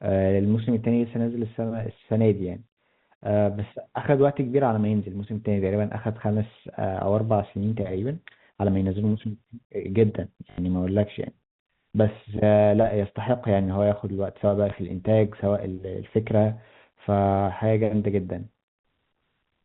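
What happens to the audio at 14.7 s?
At 14.7 s a single stretch of packet loss with last packet repeated occurs, lasting 20 ms to 14.72 s, which fits one lost 20 ms packet. The receiver replays the previous chunk of speech, which gives a small blip. On a waveform, a 20 ms segment duplicates the one before it, within the 4 kHz ceiling of the telephone-band G.711 coding.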